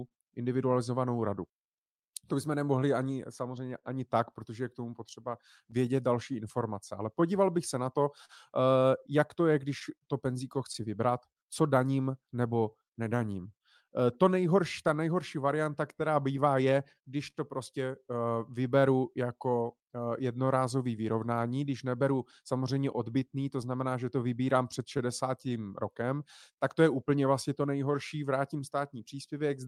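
Speech, with small timing hiccups recurring from start to finish. That is clock drift between sender and receiver: the sender's clock runs roughly 3 percent slow, so the receiver's jitter buffer keeps draining and has to be topped up to avoid running dry. Those top-ups appear as repeated timing corrections from 1.2 s to 29.16 s, small stretches that play the speech back at about 98 percent speed and add around half a second in total, spread at uneven intervals. Scattered short gaps add brief ticks and smeared syllables in four stretches: 0.07 to 3.86 s, 5.71 to 12.07 s, 14.14 to 17.38 s and 22.32 to 29.61 s. There are about 29 of them, none longer than about 40 ms, where late or lost packets were bridged by stretching the preceding sound.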